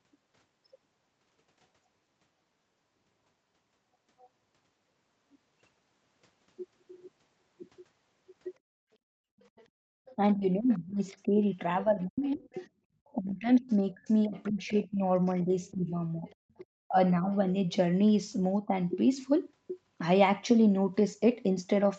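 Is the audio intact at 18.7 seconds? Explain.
No. Between 18.67 and 18.74 s the speech briefly dips, a short duck of around 10 dB lasting roughly 70 ms, so it sounds momentarily pushed back or thinned. That's most likely speech suppressed in double talk: both ends were talking at once, the echo canceller couldn't tell the local talker apart from the loudspeaker echo, and it pulled the level down on everything for that instant.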